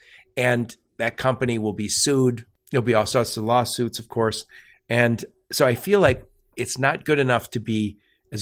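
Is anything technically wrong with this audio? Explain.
No, nothing is technically wrong: the speech passes through Opus voice compression with full bandwidth kept and only a light coding texture, which points to hybrid-mode Opus at around 24 kbps.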